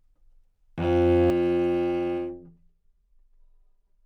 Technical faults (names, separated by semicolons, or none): channel delay (comb filtering)